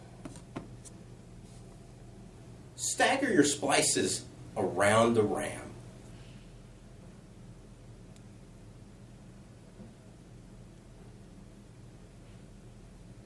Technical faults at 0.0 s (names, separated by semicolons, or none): none